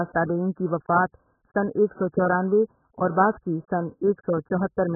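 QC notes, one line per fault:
Throughout, AAC compression: the speech is dull and muffled, with nothing above about 1.8 kHz, and sustained vowels and sibilants have a warbling, fizzy texture with smeared detail. This is likely heavy low-bitrate AAC-LC coding, consistent with a rate near 8 kbps, where the encoder drops the upper band and quantises the remaining frequency lines coarsely. The fizz and warble set it apart from a plain low-pass filter, which would sound muffled but clean.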